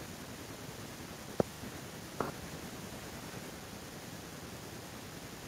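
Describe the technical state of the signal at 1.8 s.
At 1.8 s the speech signal is intact, with no audible fault at that moment.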